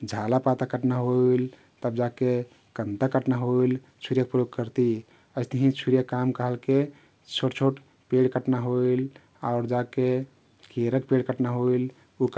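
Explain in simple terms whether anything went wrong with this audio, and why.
Nothing went wrong; it sounds like a normal call.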